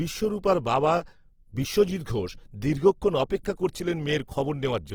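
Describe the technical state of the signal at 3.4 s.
At 3.43 s, right after "বিশ্বজিত্ ঘোষ দীর্ঘক্ষণ", a short hiss of about 15 ms leads into the next attack, which sounds soft and smeared. This is pre-echo: the transform codec spreads quantisation noise across its whole block, so noise sized for the loud onset also fills the quiet moment before it.

Around that moment the speech also sounds grainy and rough, with a noisy texture on its tones, though the bandwidth stays wide, reaching about 20.3 kHz. The likely cause is Opus compression in its CELT music mode at a low rate, which fits roughly 16 kbps. Starved bands are filled by folding lower bands or with noise rather than left empty.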